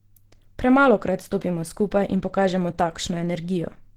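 From start to finish the speech has a muffled, hoarse quality. That's most likely Opus compression running in its hybrid speech mode at a low rate, somewhere around 16 kbps. The bandwidth still reaches full range, but the coding damage is plain throughout.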